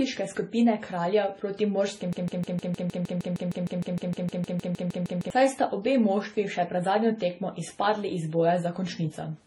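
From the start, the speech carries layered compression damage, with nothing above 11.4 kHz and smeared, warbling detail. This points to transcoding between lossy codecs, likely an AAC encode at a low bitrate later re-encoded as low-rate MP3, each stage adding its own artefacts.

From 2.13 s to 5.30 s a broken-record loop takes over. A fragment of about 0.15 s repeats exactly, back to back, roughly twenty times, and the speech for that stretch is lost. The likely cause is a stalled player or stream resending its last buffer.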